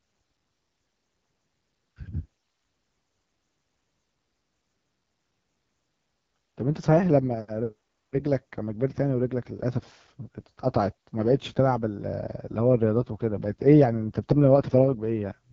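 From start to finish the speech carries AMR wideband (HD Voice) codec damage, and it's plainly audible: a rough, raspy grain over every syllable. That points to one of the two lowest AMR-WB rates, around 8.85 kbit/s, where the pulse-driven vocal tract model runs short of bits.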